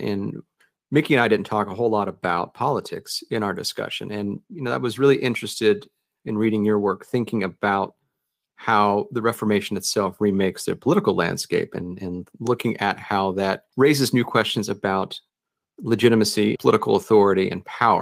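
No technical faults turn up anywhere in the speech recording. Nothing in it needs a timestamp or any further explanation.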